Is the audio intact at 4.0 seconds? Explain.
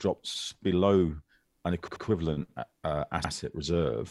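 Yes, at 4.0 seconds the audio is intact, with no dropout, glitch or other fault at that moment.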